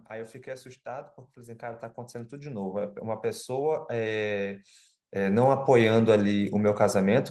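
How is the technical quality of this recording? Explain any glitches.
The recording has one clear technical problem: the level climbs steadily for almost the whole clip. Automatic gain rising runs from 0.08 s to 6.53 s, increasing by about 19 dB. The gain control judged the incoming signal too quiet and kept turning itself up gradually rather than settling at a fixed level. The speech and the background noise therefore swell together until the level stops rising near the end.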